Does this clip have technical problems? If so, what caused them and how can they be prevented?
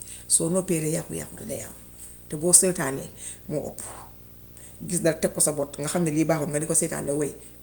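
Yes. Throughout the speech there is a steady, raspy buzz at 59.94 Hz with a fizzy hash riding above it, plus a thin whine at 15.7 kHz, sitting roughly 20 dB below the speech. This is video or display buzz: a monitor or video cable is coupling its picture timing into the audio path, with the field refresh producing the buzz and the horizontal line scan producing the high tone. Keeping audio cables away from screens and video leads, and using balanced connections, prevents it.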